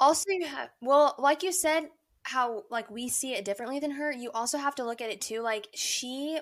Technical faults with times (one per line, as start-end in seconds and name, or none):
none